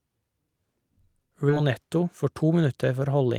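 At 1.49 to 1.51 s the speech skips ahead: roughly 0.7 s of audio was discarded while later packets were already queued, so playback lands straight on later material with no filler in between. The two sides of the cut are joined almost directly, giving an abrupt jump.

From 2.07 to 2.51 s a jitter buffer speed-up follows. The receiver, holding more delay than it targets, trimmed short pitch-period slices repeatedly, removing around 40 ms. Speech runs at about 107% speed with unchanged pitch and sounds slightly hurried.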